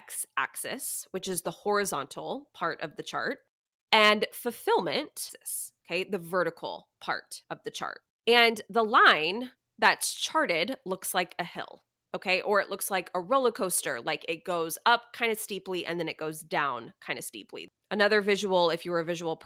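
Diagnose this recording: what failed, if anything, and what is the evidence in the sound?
The speech jumps forward abruptly at 5.3 s, with no gap or fill. Roughly a second of talk is simply absent, and the two sides butt together almost seamlessly. This is a skip ahead at the network and jitter-buffer stage. Audio already queued behind a late or overflowing stretch was played straight on, so the missing section was discarded rather than concealed. Playout delay dropped by about the same second in one step.

Shortly after, the speech sounds hurried but keeps its pitch, in four bursts. It runs about 8% fast from 5.93 to 6.41 s and again from 6.91 to 7.49 s. The strongest burst is 18% fast from 8.02 to 9.87 s, and a mild one runs 5% fast from 10.36 to 10.93 s. This is jitter buffer speed-up: the buffer held more audio than its target, and the receiver trimmed it by repeatedly cutting short pitch-period slices. 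That removed a few tens of milliseconds per burst and around a third of a second in the longest.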